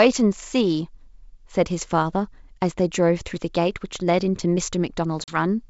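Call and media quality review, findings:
Packet loss on the ADPCM call, 5.24–5.37 s: a hard-edged silent hole of about 40 ms, roughly two packets' worth. Speech then comes back with a bit of grit while the decoder's predictor and step size drift back in line with the sender's. G.722 wideband coding at 64 kbit/s carries the call, with the top end reaching up to 7 kHz.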